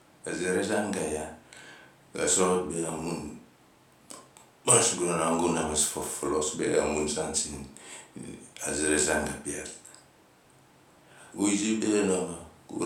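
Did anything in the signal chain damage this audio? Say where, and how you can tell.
No, nothing in this speech recording points to damage at any stage of the signal chain.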